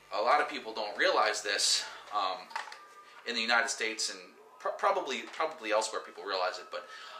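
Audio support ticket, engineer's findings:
Mains buzz, 0.00 to 2.2 s. Steady raspy buzz sitting well below the programme, roughly 35 dB down. Built on 50 Hz mains, with harmonics extending into the kilohertz range. Probable source: dimmer, rectifier or unshielded cable on the signal path. Sharp switching spikes at twice the mains rate couple in, producing the dense harmonic series heard as rasp rather than hum.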